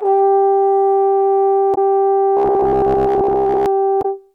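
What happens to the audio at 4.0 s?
At 3.99 to 4.06 s the music breaks up for about 70 ms, heard as a chirp, squawk, click or short hole, caused by damaged data in a compressed stream. Bytes in that part of the file are corrupted, so the decoder misreads the frames there and loses sync until it locks onto a valid frame header again. On a spectrogram this shows as a narrow vertical disturbance across the musical harmonics. On the waveform it appears as a brief break in the signal.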